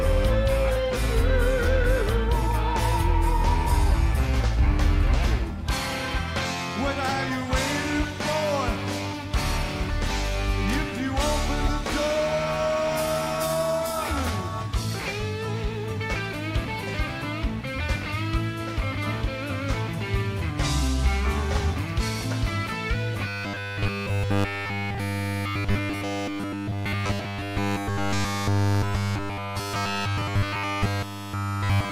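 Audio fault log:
23.28 to 31.91 s: robotic sound from repeated short buffers. From 23.28 s to the end, the audio becomes a rigid, metallic buzz at 100 Hz that follows the original only loosely, with essentially the whole span made of repeats. The likely cause is new audio arriving too seldom, so playback fills the gap by looping the most recent segment of about 10 ms while the real material is skipped. Each repeat of that segment adds a fixed 100 Hz periodicity.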